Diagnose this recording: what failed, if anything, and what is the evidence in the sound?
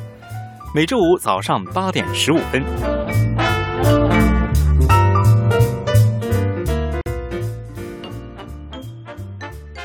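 A gap at a join of encoded pieces, at the codec stage: continuous sound drops out from 7.01 to 7.06 s, a 48 ms gap with smeared edges, then resumes where it stopped. Separately encoded segments were spliced without trimming encoder delay and final-frame padding.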